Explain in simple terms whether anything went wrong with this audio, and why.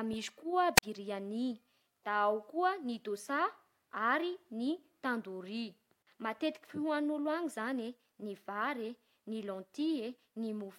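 Near the start, from 0.75 to 0.83 s, there's a brief burst of hiss and then the speech cuts out for about 46 ms before coming back. That's a wireless microphone squelch dropout: the radio signal weakened, so the receiver muted itself until reception recovered.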